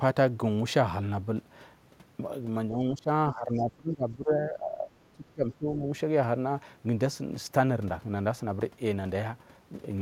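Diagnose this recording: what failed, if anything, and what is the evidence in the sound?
Call processing failed, with speech suppressed in double talk, likely an echo canceller mistaking overlapping far-end talk for echo and attenuating both. The speech dips by roughly 15 dB from 2.7 to 3.08 s, then by around 20 dB from 3.33 to 5.89 s.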